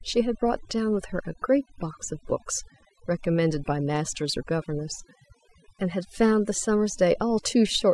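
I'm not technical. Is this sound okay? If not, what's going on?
No. Across the whole recording, this speech has overdone noise removal. A cleanup tool meant to hush background noise was turned up too far, so it keeps switching off slices of the sound it mistakes for noise, taking the softer parts of the voice along. The background drops away and breaks up into twinkling, sparkly specks. Unlike plain muffling, the loss flickers on and off rather than dulling everything evenly.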